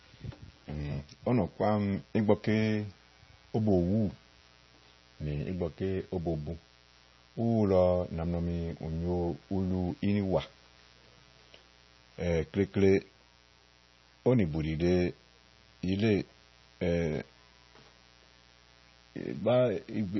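From the first second to the end of the speech, a mains buzz sits underneath everything, about 30 dB below the talking. It is built on 60 Hz, and the sharp spikes a dimmer, rectifier or unshielded lead lets in twice per cycle spread harmonics well up into the kilohertz range. That gives a raspy, edged buzz rather than a smooth hum. A pure hum would be a dull low tone that a single notch near 60 Hz could remove. This one keeps its bite across the spectrum.

Also running the whole length is damage that points to heavy MP3 compression at a very low bitrate, one that fits roughly 24 kbps. The encoder likely ran out of bits and dropped everything above 5.9 kHz, so the speech sounds muffled and dull. Weak frequency lines flicker in and out between frames, which makes the sound watery and swirly, with metallic chirps on s sounds and softened consonant attacks. The fixed treble cut alone would resemble a plain low-pass filter, but a filter would not add that shifting swirl.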